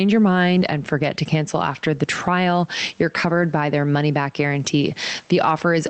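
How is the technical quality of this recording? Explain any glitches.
The recording suffers from gain pumping for its whole length. The gain swings by around 10 dB. Loud and soft parts sit close in level, so the speech sounds squashed. The likely cause is input gain set far too high, with a fast limiter clamping down on each peak and releasing in the gaps. The faint room noise sits about 42 dB below the speech. The audio also passed through an Opus call path with highs cut off at about 8 kHz, which fits a modest bitrate.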